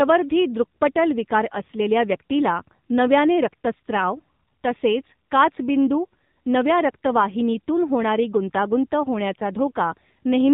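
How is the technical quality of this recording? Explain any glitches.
Technical quality is poor: the speech is dull, boxy and plainly buzzy throughout. This is AMR narrowband mobile codec damage, present across the whole clip. The muffled top end comes from 8 kHz sampling, which passes nothing above 4 kHz. The buzzy, synthetic edge comes from a vocal-tract model excited by only a few pulses per short subframe, which fits a low bitrate of around 7.4 kbps.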